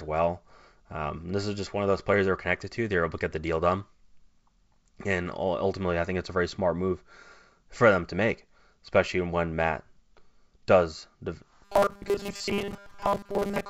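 From 11.65 s to the end, the speech turns to a rigid 200 Hz metallic buzz: robotic sound from repeated short buffers, likely 5 ms repeats replacing most of the audio.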